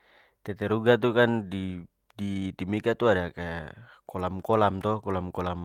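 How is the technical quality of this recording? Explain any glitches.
The technical quality of this recording is good, with no glitches to explain.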